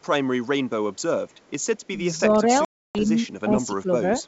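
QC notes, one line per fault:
0.01–0.06 s, 0.95–1.02 s and 1.29–1.52 s, echo leak: a very faint delayed copy of the speech trails behind it, about 35 to 40 dB down, always 219 ms late. The likely cause is a far-end loudspeaker whose echo canceller let a residue through, which was sent back. Unlike reverberation, the copy is a discrete repeat at a fixed delay, not a smooth decay, and it appears only in short scraps.
1.95–2.06 s, 3.44–3.52 s and 3.68–4.03 s, speech suppressed in double talk: the talker's level sags while the other side is also talking. The dip is slight at first, about 10 dB at 3.44 s, and deepest, around 15 dB, in the last stretch. The likely cause is an echo canceller that could not separate the near talker from the loudspeaker echo and attenuated both. Unlike packet loss, the sound dips and thins rather than dropping into one long silent hole.
2.65–2.98 s, packet loss on an ADPCM call: a 300 ms hole drops to silence with abrupt edges, which points to roughly thirty short packets missing in a row. 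On resumption the speech returns slightly distorted before settling within a few tens of milliseconds. The decoder's adaptive predictor and step size fell out of step with the sender's during the gap. The hard onset and the recovery transient separate this from double-talk suppression. The G.722 wideband coding underneath shows faint or no damage of its own.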